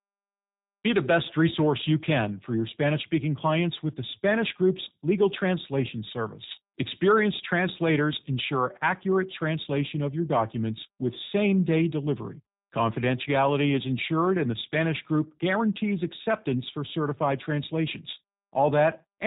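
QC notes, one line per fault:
Throughout, G.729 codec: speech is cut off above 4 kHz and plainly rough and synthetic, rebuilt from a filter and sparse pulses, consistent with an 8 kbit/s stream.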